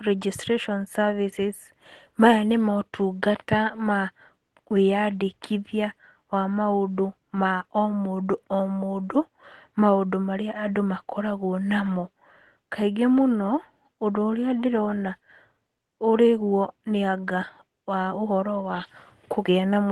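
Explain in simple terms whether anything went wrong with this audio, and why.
Yes, one small thing near the very end, from about 18.63 to 18.89 s. A few packets of the call audio went missing there, but each next packet carried a rough backup copy, so this is a lost packet rebuilt from error correction. You won't hear a gap. Instead, roughly a seventh of a second or so sounds a bit grainier and noisier than the surrounding speech, because those backup copies are much lower quality than the originals.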